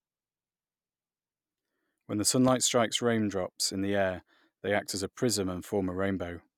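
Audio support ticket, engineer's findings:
Loud pop, 2.48–2.51 s: single sharp transient roughly 10 dB above the speech, which continues underneath. Likely a voltage spike from a connector, switch or static discharge.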